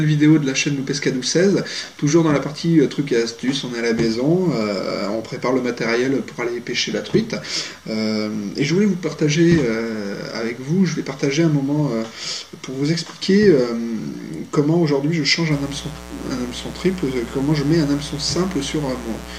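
From 15.51 s to the end, a mains buzz comes in: sharp 60 Hz switching spikes with harmonics into the kilohertz range, a raspy drone sitting roughly 15 dB under the audio.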